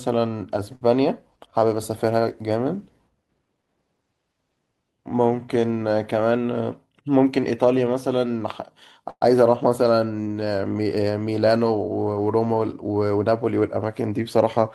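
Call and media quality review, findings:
Short stall from a late packet, 0.75–0.83 s. Packet missed its playout slot and the jitter buffer underran. Receiver held the preceding sound for 55 ms until the packet landed, then resumed from the same point. Nothing lost, but latency grew by 55 ms. Audible as one sound drawn out slightly too long, with a slight buzz or dip.

Jitter buffer speed-up, 6.37–7.23 s. Buffer overfilled, as after a burst of late packets arriving together. Receiver trimmed small pitch-period slices repeatedly to shed the excess, around 70 ms in all. Speech plays about 7% fast at unchanged pitch, so the speech sounds briefly rushed.

Call audio freeze, 9.09–9.23 s. Likely packets held up in transit, draining the jitter buffer. A 118 ms hold: the last sound carries on as a decaying buzz or hiss, ending in roughly 40 ms of silence, then speech picks up exactly where it paused. 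Nothing skipped, but a gap is inserted and delay rises by 118 ms.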